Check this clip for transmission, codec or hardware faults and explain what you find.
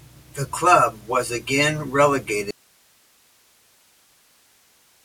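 One fault is present, an audio dropout to a faint residue. At 2.51 s the speech cuts out abruptly and never returns; only hiss roughly 35 dB below the signal remains to the end, likely from a signal break upstream while the following path stayed live. The waveform collapses to a thin noise band, and the spectrogram shows harmonics ending at a vertical edge, replaced by faint broadband haze.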